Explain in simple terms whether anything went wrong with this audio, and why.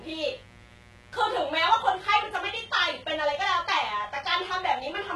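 Electrical interference from the 60 Hz mains supply leaked into the recording chain, so a quiet but steady, raspy mains buzz sits underneath the speech from start to finish.

The audio was also likely squeezed through heavy HE-AAC compression, which keeps only the lower frequencies and fakes the treble by copying them upward. Throughout, s sounds turn gritty or lispy, and nothing survives above about 11.8 kHz.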